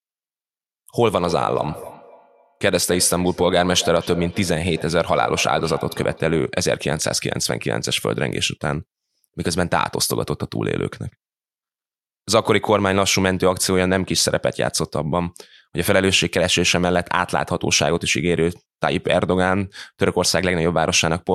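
Speech with a feedback echo between two devices from 1.18 to 6.56 s. Another device in the room replays this microphone's signal, which is picked up again at a fixed interval of roughly 300 ms and peaks about 15 dB below the speech. That fixed gap separates it from room reverberation, which smears continuously rather than repeating.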